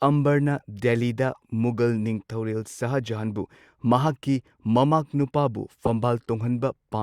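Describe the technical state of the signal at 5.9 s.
A corrupt frame decoded sits at 5.85 to 5.88 s. A single compressed frame arrived with damaged bits, and the decoder played it anyway. Misread values push energy to the wrong frequencies. It is heard briefly as a loud, sharp chirp, squeak, blip or burst of noise.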